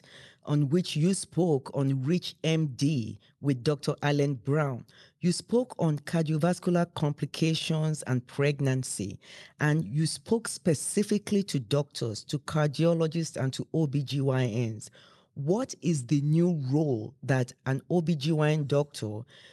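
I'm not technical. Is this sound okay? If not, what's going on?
Yes, no faults heard.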